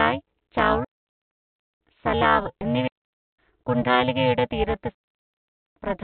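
Frames were windowed and overlap-added at a spacing whose gains don't sum flat, so the level dips by about 60 dB once per frame, around 400 times a second. Throughout the speech this overlap-add ripple becomes a metallic buzz with extra tones around each note.

The digital wireless link then lost too much data three times, and the receiver muted with a very short fade. Each dropout leaves a clean hole of near silence with no noise burst: 0.85 to 1.81 s (0.96 s), 2.88 to 3.39 s (0.51 s), and 4.95 to 5.76 s (0.82 s). The band-limited sound, with nothing above 4 kHz, fits a G.711 call path.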